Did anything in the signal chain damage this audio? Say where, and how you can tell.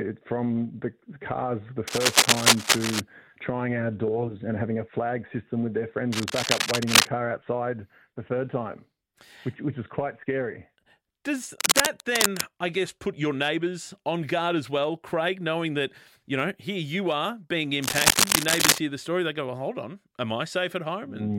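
Yes: cable scratch noise in the analogue wiring, with rustling bursts about 5 dB louder than the sound (about level with it at 11.44–12.44 s) at 1.87–3.00, 6.12–7.07, 11.44–12.44 and 17.82–18.79 s, likely from a worn connector being moved. Unlike steady hiss or isolated clicks, each burst is dense and uneven.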